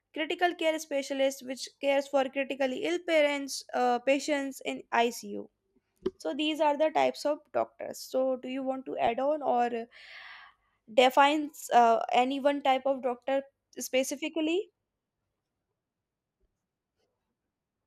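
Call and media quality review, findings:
DAB burbling, 9.07 s, after "do you want to": short noise blips in single sub-bands over the speech. Weak reception; residual bit errors past error correction corrupt MP2 scale factors and samples, single sub-bands jumping in level for up to a frame, three frames hit.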